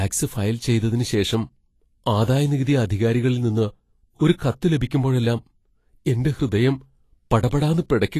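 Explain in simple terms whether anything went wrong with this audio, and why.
The speech sounds hissy and grainy throughout, with nothing above 14.2 kHz. This is likely Vorbis compression at low quality, which turns fine treble detail into noise.

From 4.37 to 4.40 s, a short hiss comes just before a sharp sound. This is pre-echo: the codec's noise spreads into the quiet moment before the attack.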